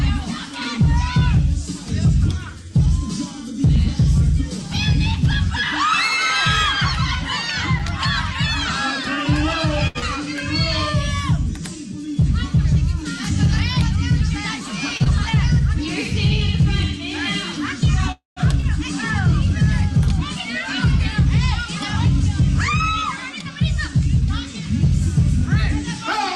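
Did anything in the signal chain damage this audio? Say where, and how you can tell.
Yes. Six kinds of fault are audible, all but one in the network and jitter-buffer stage of a call.

A block of digital silence at 7.79 s, 5 ms long, comes from the driver or buffer stage: either the output buffer was not filled in time or a calculation produced invalid values, and a short run of silence was played instead. The audio cuts out and back with no fade. At this length it is too short to hear as a gap and comes across as a tick or dip rather than a hole.

Short stalls from a late packet occur at 9.87 to 9.98 s and at 14.97 to 15.03 s. In each case a packet missed its playout time, the jitter buffer ran dry, and the receiver held the last sound for 73 ms and then 27 ms until the packet arrived. Playback then resumed from the same point, so nothing is lost. The sound is drawn out, adding that much delay.

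Short concealed packet loss follows each stall, at 9.99 to 10.05 s and 15.04 to 15.08 s. Both times 40 ms of audio never reached the decoder. The receiver covered the hole by extending the preceding sound, for 30 ms and 17 ms respectively, then blended back into the real signal. This is heard as a brief smear or wobble, and 40 ms of the original is gone at each point.

The call audio freeze runs from 18.12 to 18.39 s. The last sound carries on and fades, and about 150 ms of silence follows before the audio picks up where it stopped, 248 ms later than it should. Nothing is missing, but a gap has been inserted. The likely cause is held-up packets emptying the jitter buffer, with concealment running out during the wait.

A skip ahead occurs at 18.60 to 18.66 s, just after that freeze. Around 70 ms of audio was discarded while later audio was already waiting, either lost in transit or dropped by the jitter buffer, and playback jumps forward. 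The two sides are joined almost directly, with only about 23 ms of fill at the join, so the sound lurches on with a piece cut out.

Jitter buffer speed-up runs from 20.36 to 24.86 s. The buffer held more audio than its target, so the receiver removed short pitch-period pieces over and over, about a tenth of a second in total. Across those four and a half seconds the audio plays at 102% speed with its pitch unchanged, a small acceleration that shortens the timing without shifting the tone.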